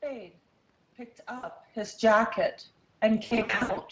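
Speex codec coding runs through the whole speech clip, leaving it plainly hoarse and noisy. The CELP coder has too few bits to model the excitation cleanly, which fits a bitrate of around 20 kbps. VoIP packet loss concealed by the speech codec appears first at 1.37 to 1.45 s, where about 60 ms of frames go missing. The decoder fills the gap by stretching the last pitch and filter into a fading tone or coloured noise. It returns from 3.25 to 3.82 s, with about 360 ms lost in scattered gaps over 540 ms, none longer than 60 ms. Because each concealed frame builds on the previous one, the speech stays weak or distorted across that stretch.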